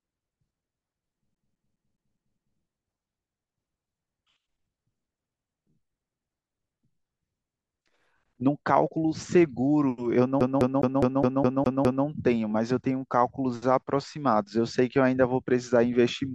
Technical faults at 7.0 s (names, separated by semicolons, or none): none